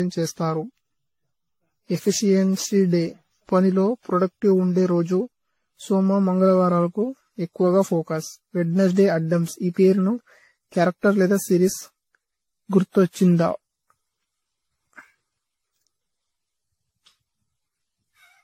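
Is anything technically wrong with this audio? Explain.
Yes. Throughout, the speech sounds swirly, hollow and smeared, with nothing above 16.5 kHz. This is likely generation loss from about ten AAC re-encodes, each compounding quantisation noise.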